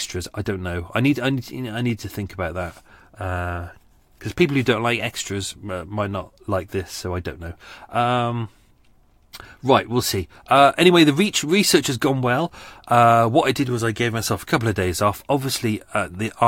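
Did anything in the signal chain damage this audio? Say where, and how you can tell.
No, no signal-chain damage heard.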